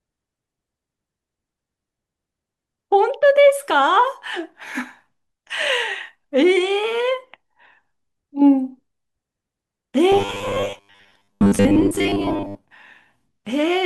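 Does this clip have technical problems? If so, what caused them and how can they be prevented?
Yes. Robotic sound from repeated short buffers runs from 10.12 to 12.64 s: the speech collapses into a rigid, metallic buzz at 100 Hz that only loosely tracks the words. This is likely caused by audio arriving too slowly, so the playback side kept recycling the last 10 ms chunk, which fits a 10 ms buffer, while about half the real audio was dropped. Keeping the capture and network path fed steadily, with a larger jitter buffer, prevents it.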